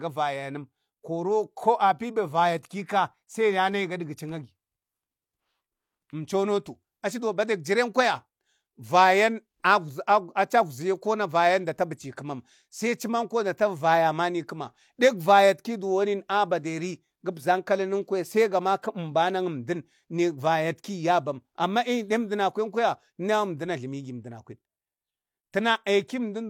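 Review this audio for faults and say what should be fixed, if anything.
Pre-echo at 2.69 s, just after "koro apie": a short hiss smears about 15 ms ahead of a sharp speech attack, because the codec spread quantisation noise across the whole transform block. A spectrogram shows a broadband haze before the onset, and the waveform shows low-level noise ahead of the transient. Preventing it needs an encoder with block switching, so short attacks get shorter blocks, or temporal noise shaping, or a higher bitrate.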